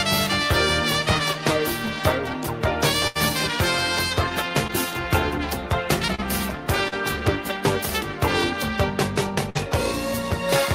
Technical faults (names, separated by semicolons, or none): burst of packet loss; short concealed packet loss